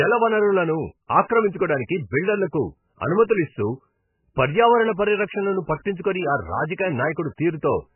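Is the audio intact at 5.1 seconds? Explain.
No. At 5.1 seconds the speech sounds dull, muffled and watery, with a swirling, chirpy smear on sibilants, and this persists through the whole clip rather than just that moment. The likely cause is heavy MP3 compression: starved of bits, the encoder has cut everything above 3 kHz and dropped weaker frequency lines that flicker on and off between frames, which fits a very low bitrate of around 10 kbps.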